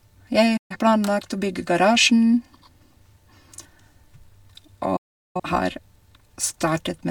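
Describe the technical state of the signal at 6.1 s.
At 6.1 s the speech signal is intact, with no dropout, distortion, glitch or other fault present at that moment.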